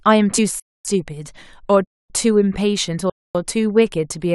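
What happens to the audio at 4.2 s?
Nothing goes wrong at 4.2 s; the audio there is intact, with no dropout, click or distortion.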